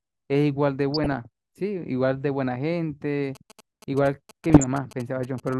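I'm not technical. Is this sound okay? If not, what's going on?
No. DAB burbling, at 0.94 to 1.25 s and again at 4.50 to 4.76 s: weak digital radio reception corrupted parts of the speech data, putting short blips of noise into the sound.

GSM signalling bursts, from 3.35 to 5.49 s: a nearby older mobile phone was contacting its network, and the audio equipment picked up its radio pulses as a galloping ticking buzz.

GSM phone buzz, at 5.53 s: a very brief, harsh 217 Hz buzz is heard as the phone's transmissions are picked up by the audio circuitry.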